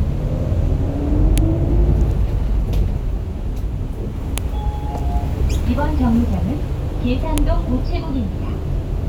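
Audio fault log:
1.38 s, 4.38 s, 7.38 s: file header played as audio. The audio was assembled from separate pieces about 3.0 s long, and each piece's WAV header was left in place instead of being stripped. Those few dozen bytes of file metadata are read as sample values, so at every join a sharp, loud click or snap cuts in for an instant, regardless of what the underlying sound is doing. The even 3.0 s spacing gives away the piece boundaries.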